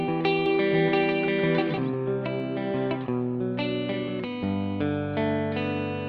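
From 0.46 to 2.40 s a doubled audio track appears: a second copy about 150 ms behind, roughly 5 dB quieter, likely from a slower capture path. Unlike an echo, it has no decay or room colour and stops abruptly.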